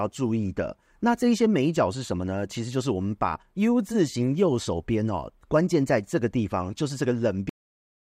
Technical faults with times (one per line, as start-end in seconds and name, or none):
7.49-8.17 cut-off end